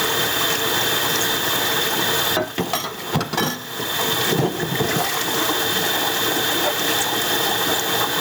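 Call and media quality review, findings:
Gain pumping, whole clip. Gain swing of roughly 15 dB. Loud and quiet bits squashed close together. Likely cause: input gain set way too hot for the mic, with a fast limiter or compressor in the capture chain clamping down on each peak and releasing in the pauses. Fix is at the gain stage, not downstream.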